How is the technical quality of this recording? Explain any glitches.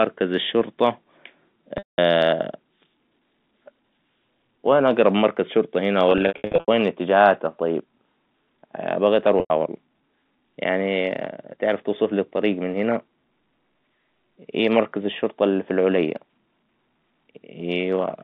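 The recording has three dropouts from packet loss with pitch repetition, heard over a telephone-band line (roughly 150 Hz to 3.6 kHz) that fits G.711 A-law coding.

The gaps fall at 1.78–1.98 s, at 9.40–9.50 s, and scattered across 6.12–6.68 s, between "أقرب مركز شرطة هنا" and "إتجاهاته طيب". That last stretch loses 340 ms in runs of up to 80 ms. The 200 ms and 100 ms losses point to 20 ms packets. The receiver fills each gap by looping the last pitch cycle, so the sound briefly holds as a buzzy, frozen tone, then fades. On a spectrogram the harmonics run flat and unchanging before dimming. In the waveform, identical cycles repeat with shrinking amplitude.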